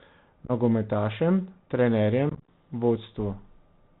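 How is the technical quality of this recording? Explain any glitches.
The recording is poor, with narrowband Bluetooth headset coding throughout and two bursts of dropouts.

The link runs through the Bluetooth CVSD headset codec, which fits a 64 kbit/s CVSD link. Each sample is a single up-or-down bit with an adapting step. Nothing passes above 4 kHz. Loud high sounds outrun the step and distort, s sounds come out scratchy, and a grainy hiss sits under the speech.

Unconcealed Bluetooth headset packet loss occurs twice, with nothing to fill the missing packets. From 0.45 to 0.51 s, a handful of packets drop, about 30 ms lost in total with runs up to 15 ms, giving brief holes with abrupt edges. From 2.30 to 2.48 s, roughly thirty packets go, about 109 ms lost with runs up to 22.5 ms. The speech crackles and sounds chopped there, dipping quieter as it resumes.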